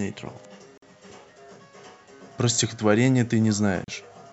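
A brief hole of silence cuts into the speech at 0.78 to 0.82 s (about 47 ms) and again at 3.84 to 3.88 s (about 36 ms). Each has smeared edges before the speech resumes where it stopped. These are gaps at a join of encoded pieces: separately encoded segments were spliced without trimming each encoder's start delay and final-frame padding.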